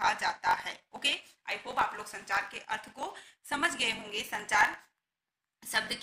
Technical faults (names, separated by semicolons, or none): block size mismatch (truncated)